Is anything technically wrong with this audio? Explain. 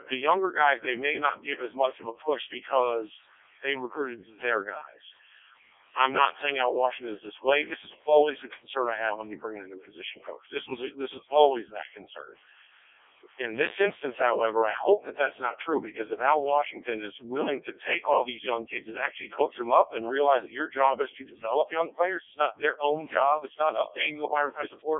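Yes. Throughout, the speech passes through a Codec 2 vocoder, which fits its 0.7 kbit/s mode. Because the speech is rebuilt from pitch and envelope rather than waveform, it sounds robotic and buzzy, not warbly, and is confined to 300 Hz to 3.6 kHz, with nothing above 3.7 kHz.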